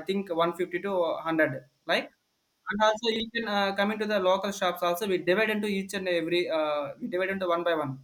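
Speech, with a short jumbled spot from 3.12 to 3.2 s where chunks play out of order: one 40 ms chunk arrives a step late and lands after its neighbour, so nothing's missing but the sequence scrambles, with three hard joins.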